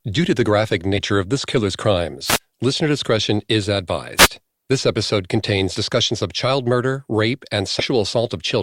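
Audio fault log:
0.97–1.00 s: compressed frames skipped. Around 50 ms of audio is lost, consistent with several 10 ms frames. The audio jumps ahead at the join.
2.25–2.39 s: wireless microphone noise hit. The FM radio signal fades, so receiver hiss swells as a short swish, showing as a broadband noise patch across the spectrogram.
4.17–4.28 s: wireless microphone noise hit. A second fade brings up a brief burst of static, visible as a broadband smear of noise.
7.79–7.84 s: compressed frames skipped. Around 70 ms of audio is missing, which fits several 10 ms frames dropped. The spectrogram shows a sudden jump in content at the seam.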